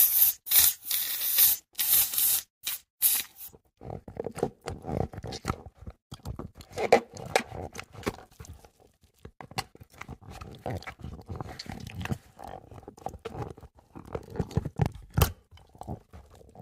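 At 0.51 s there is a tiny skip, caused by an overlap between stream segments. Two segments claimed the same stretch of time. The player trimmed the overlap, but that audio was never duplicated. About 5 ms of sound was lost and the waveform jumps. The same skip recurs at 2.49 s, losing about 7 ms. From 10.44 to 10.46 s the gap is longest, about 20 ms. At 14.42 s about 6 ms goes missing. The spacing fits 2-second segments.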